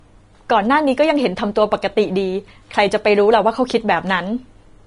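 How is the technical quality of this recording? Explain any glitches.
The recording's technical quality is compromised by plainly audible codec damage that runs through the whole speech clip, with no separate glitches at particular moments.

Throughout, the sound is hissy and grainy, with attacks that lose their crispness and nothing at all above 10.6 kHz. The likely cause is Vorbis compression at a low setting, pointing to a bitrate around 34 kbps. The encoder keeps a smooth spectral outline but quantises the upper band so coarsely that fine detail turns into noise of similar energy, and it discards everything past the cut-off. On a spectrogram this shows as a flat ceiling at 10.6 kHz with speckled, smeared texture beneath it.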